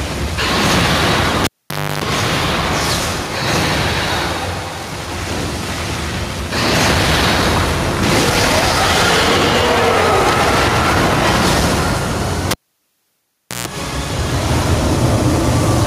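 Throughout the audio the level pumps, a swing of roughly 5 dB, leaving loud and soft parts squashed together. This is gain pumping, likely from gain set far too high with a fast limiter or compressor clamping down on every peak.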